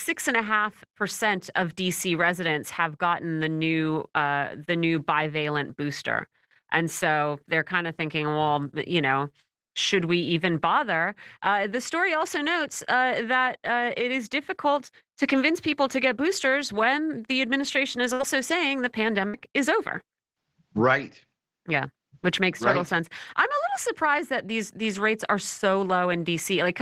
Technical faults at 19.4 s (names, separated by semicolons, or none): burst of packet loss